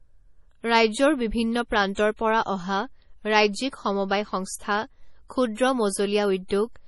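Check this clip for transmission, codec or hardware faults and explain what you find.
One codec fault runs through the whole speech clip: heavy MP3 compression. Nothing sounds above 11.5 kHz. The treble stops at a hard ceiling. Quiet detail swirls and turns watery. S sounds go metallic and chirpy. Consonant attacks smear. The likely cause is an encoder short of bits, which fits a low bitrate around 32 kbps. Such an encoder cuts the top band outright. It also drops weak frequency lines, and they flicker on and off between frames.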